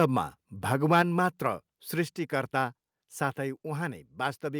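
From 0.92 to 1.01 s the loudest part of the speech picks up a harsh, crackly edge, and that's microphone overload. The input is likely set too hot, so peaks push about 3 dB past the converter's ceiling and a small share of samples get their tops flattened.

Right after, at 1.02 s, everything drops by about 4 dB at once, voice and background together. That's the microphone volume stepped down, likely the call software reacting to that clipped peak by cutting the device's input level in a single jump.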